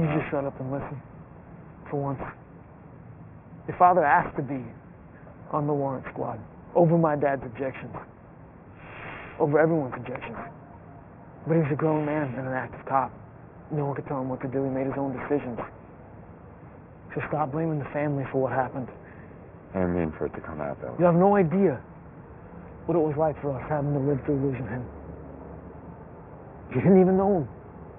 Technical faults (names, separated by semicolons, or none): aliasing